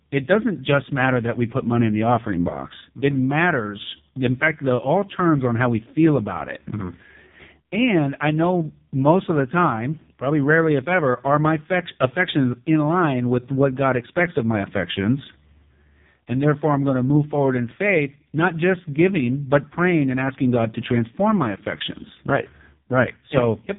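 The speech has been squeezed through the AMR narrowband mobile codec for its whole length, at a setting that sounds like the lowest rate, around 4.75 kbps. Nothing above 3.8 kHz survives, and the few-pulse vocal-tract model leaves the voice heavily buzzy, thin and synthetic.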